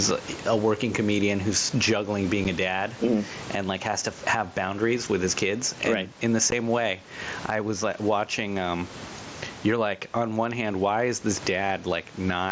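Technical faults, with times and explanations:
Throughout, gain pumping: the level swings by roughly 15 dB. Loud and quiet passages sit close together and sound squashed, likely from excessive microphone gain driving a fast limiter.
2.44 s and 6.51 s, unconcealed Bluetooth headset packet loss: short holes with hard edges, about 7.5 ms and then 15 ms long, consistent with one and then two dropped mSBC frames. Nothing fills the gaps, so the speech cuts out abruptly.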